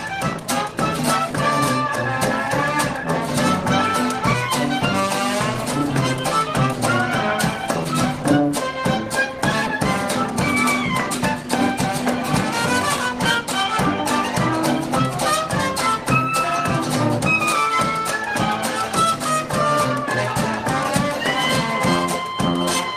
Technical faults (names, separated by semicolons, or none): skip ahead